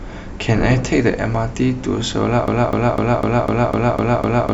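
At 2.48 s a broken-record loop begins: a 0.25 s piece of speech repeats exactly eight times until the clip ends. Unlike an echo, nothing decays or overlaps. The identical fragment restarts, and the speech that should follow is lost, likely from a stalled stream.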